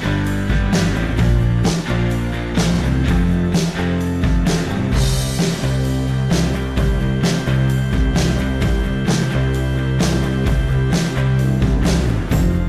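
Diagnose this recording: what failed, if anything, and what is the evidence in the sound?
The failure is at the codec or storage stage, as repeated frames. At 2.74 s a stretch of about 46 ms is played twice in a row, heard as a brief stutter where the sound jumps back and restarts. The block length fits two compressed frames that were written or sent twice, and the clip is 46.4 ms longer as a result. On a spectrogram the same time slice appears twice side by side. The waveform shows an identical segment copied directly after itself.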